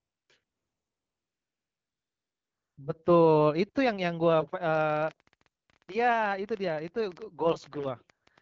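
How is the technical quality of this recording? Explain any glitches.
The recording has two audible faults over light AMR wideband (HD Voice) coding: stretches where the real background is replaced by synthetic noise, and a long run of clicks in the second half.

AMR comfort noise: From 0 to 0.29 s and from 0.43 to 2.77 s, the background turns into a smooth, even hiss that switches on and off abruptly. It appears again in brief flickers at 5.63 to 5.67 s, 5.79 s and 5.85 s. In each gap, the phone judged the talker silent and stopped sending speech frames. The receiver filled the gap with noise synthesised from a rough sketch of the background's level and spectrum, so the real room sound disappears for those moments.

Train of clicks: From 4.75 to 8.39 s, around forty sharp, similar ticks pop over the audio at roughly 11.6 per second. Their spacing is uneven, and they sound through the pauses as well as the speech. 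At their peaks they are about as loud as the talker. An external pulse source was likely injecting them, such as electrical interference from nearby equipment or a faulty connection or power supply.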